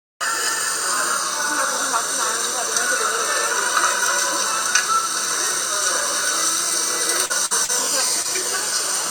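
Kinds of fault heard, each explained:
Short concealed packet loss: Brief smears or small wobbles appear at about 7.25, 7.65 and 8.22 s, where the sound briefly goes slightly unnatural before settling. Small stretches of audio, about 40 ms at the first two and 20 ms at the last, never arrived in time to be decoded. The receiver covered each hole by extending the preceding sound for roughly the same length, then blended back into the real signal.
Burst of packet loss: Around 7.46 to 7.53 s the sound holds on unnaturally, as a sustained, dimming continuation, and then picks up slightly further along, with a short piece missing. About 40 ms of consecutive audio was lost or came too late to play. The receiver filled the gap by continuing the last sound for roughly 48 ms while fading it down, before resuming with the audio that followed.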